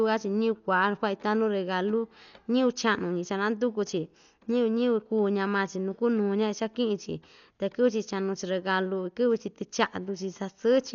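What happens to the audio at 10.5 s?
At 10.5 s the speech is dull and band-limited to about 7 kHz, with rough, fluttering noise, likely Dolby Digital compression at a starved bitrate near 48 kbps, present throughout.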